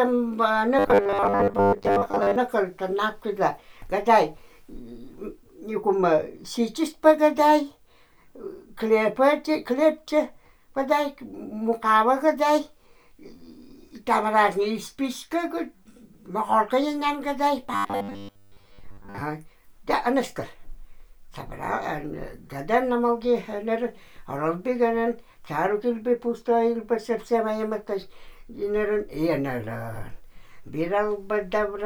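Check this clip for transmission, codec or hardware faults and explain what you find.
Two stretches of robotic sound from repeated short buffers, at 0.79 to 2.36 s and 17.74 to 19.21 s. New audio likely arrived too slowly, so a 10 ms fragment was replayed in place of most of the real signal. That stamps a rigid, metallic 100 Hz buzz onto the sound.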